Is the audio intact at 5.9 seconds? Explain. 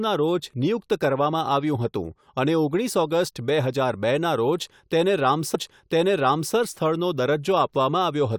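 No. At 5.9 seconds the speech is inside a stream segment repeat running from 5.54 to 6.54 s. The player queued the same segment twice, so about 1.0 s of the programme plays again, with a small blip where playback jumps back. Unlike a buffer stutter, which loops a tiny slice into a rapid buzz, this replays a full second of intelligible speech, and unlike a dropout, nothing goes missing; time is added.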